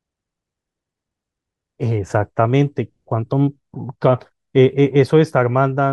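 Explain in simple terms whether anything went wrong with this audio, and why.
Nothing went wrong with this audio, because no fault can be heard anywhere in the recording.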